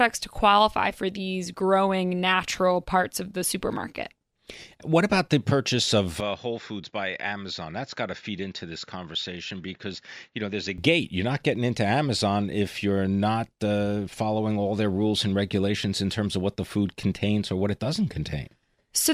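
From 6.20 to 10.78 s the speech turns dull and noticeably quieter, with a faint new hiss, likely because the input switched to a poorer device. A spectrogram shows everything above 7.2 kHz cut flat, and the waveform shrinks, with no gap at either switch.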